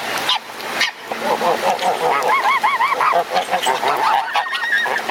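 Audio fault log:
throughout, gain pumping: the level drops away under each loud sound, swinging by something like 20 dB, so loud and quiet passages sit unnaturally close together and the whole clip sounds squashed and breathing. This is likely the input gain set far too high for the microphone, with a fast limiter or compressor clamping down on each peak and releasing again as soon as it passes.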